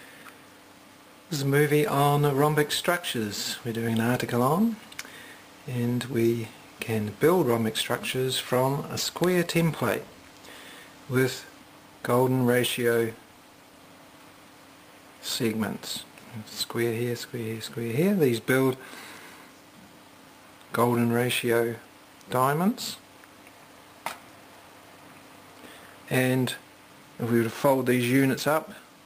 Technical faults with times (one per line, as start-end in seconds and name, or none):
12.05-13.87 call bitrate drop